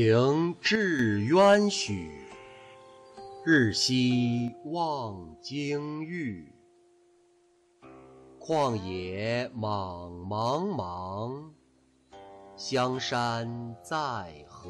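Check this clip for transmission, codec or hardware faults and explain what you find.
There are two faults, both of the same kind. From 0.76 to 0.99 s, and again from 4.48 s to the end, the level falls abruptly by about 6 dB. This is likely one channel dropping out before the mono sum, which halves what both channels shared and removes anything unique to the lost side. The drop is a clean step of exactly half amplitude rather than a fade.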